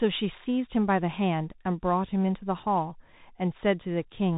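Throughout the speech, a Bluetooth CVSD headset codec, at a rate that fits a 64 kbps link, codes each sample as one adaptive up-or-down step. Nothing above 4 kHz survives, s sounds turn scratchy, loud high passages distort, and a granular hiss sits underneath.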